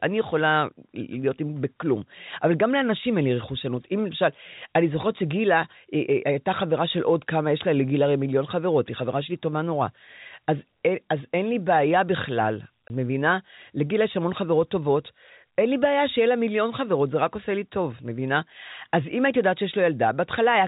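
At 12.88 to 12.90 s there's a short dropout from packet loss filled with silence. A 20 ms stretch of the speech just vanishes, which fits one packet going missing, with hard edges. The band-limited telephone sound of the G.711 coding runs underneath.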